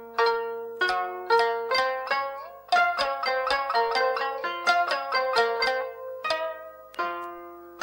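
Video or display buzz runs through the whole clip. A screen or video cable is leaking into the audio path. A 50 Hz buzz, the picture's field rate, carries hash above it. A faint 15.6 kHz line-rate whine sits on top. Both stay roughly 35 dB below the sound.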